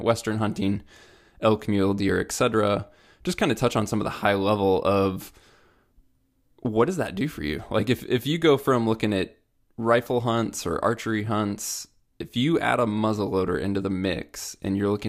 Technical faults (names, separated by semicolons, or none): none